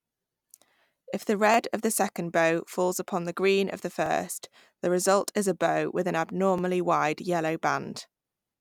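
At 1.54–1.56 s, 4.06–4.08 s and 6.58–6.61 s, the speech gives a brief click and stutter. These are overlapping chunks. The audio was handled in 2.5 s blocks. Each block started 21 ms early, so that sliver plays twice at every join.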